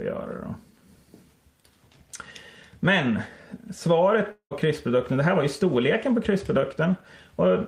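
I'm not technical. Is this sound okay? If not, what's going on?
No. At 4.31 s the sound turns into a fading buzzy hiss, goes nearly silent, then picks up again at 4.54 s with about 0.2 s simply gone. This is likely a long network dropout: audio stopped arriving, and the player briefly papered over the gap.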